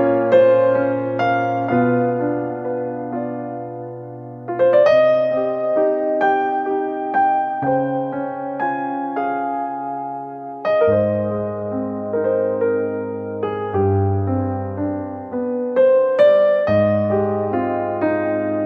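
Nothing stood out as a technical problem on listening to this recording.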